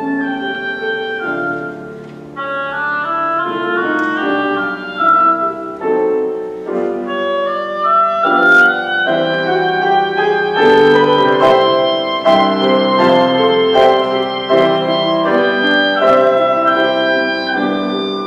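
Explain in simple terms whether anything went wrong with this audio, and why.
Hard clipping at 5.09–5.12, 8.27–8.66, 10.62–11.62, 12.26–13.97, 14.53–14.67, 15.33–16.29 and 16.68–16.85 seconds: the loudest moments were too big for the recording to hold, so their peaks got chopped flat. That causes a crackly, harsh edge, worst between about 10.6 and 14 seconds.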